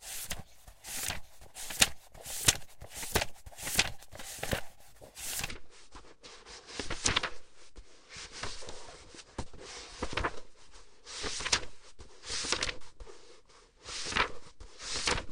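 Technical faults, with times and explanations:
5.49–15.31 s, section at the wrong speed: playback runs at 0.616 times speed, so pitch falls roughly ten semitones as timing slows, unlike a pitch shift; likely a wrong clock.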